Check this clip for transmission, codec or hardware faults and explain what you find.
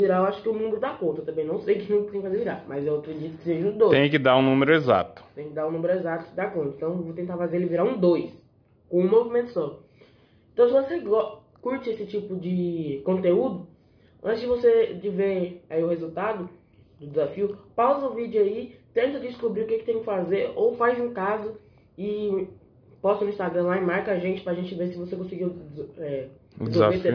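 No faults turn up in this clip.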